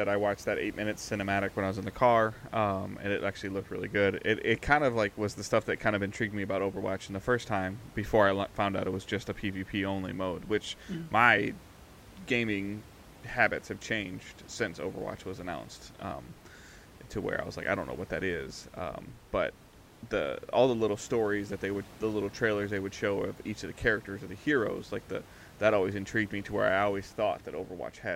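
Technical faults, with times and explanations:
No technical faults are present in the signal; the only background is the room's own noise, sitting about 22 dB below the speech, which belongs to the recording itself rather than to the system.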